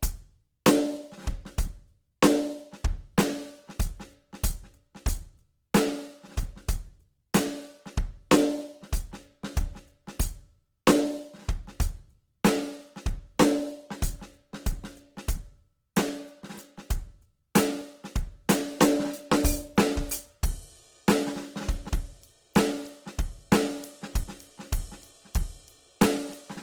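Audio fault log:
Throughout: Opus compression. The music sounds rough and grainy, with sustained tones turned noisy and sandy, and the damage is plainly audible. This is likely a low-rate Opus encode in its music (CELT) mode, consistent with roughly 16 kbps. That mode keeps each band's overall energy but, short of bits, fills band detail with folded or noise-like content. So there are few hollow gaps, just texture instead of clean tone. Bandwidth stays full, reaching about 20.2 kHz.
17.81 s, 21.89 s, 24.24 s: dropped buffer (overrun). Each is a sudden jump forward in the music with no silence. The skip is short at 17.81 s, about 20 ms. The later two are longer, about 70 ms. The likely cause is that the program did not collect incoming samples before the hardware overwrote them. That stretch is lost, and the audio on either side is spliced directly together.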